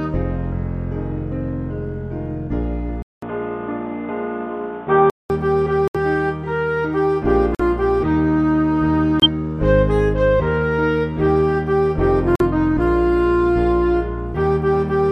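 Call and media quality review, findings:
Input switched to a poorer device, likely: 3.02–5.30 s, dull and boxy, nothing above 3.8 kHz, new noise floor roughly 30 dB down, level shift of a few dB, 200 ms gap at switch. New noise and level, unlike a codec bandwidth drop.

Corrupt frame muted: abrupt holes at 5.88, 7.55, 9.20, 12.36 s, 56–81 ms each, suggesting two or three decoder frames discarded. Hard silence with timing kept, unlike concealment's smeared fill.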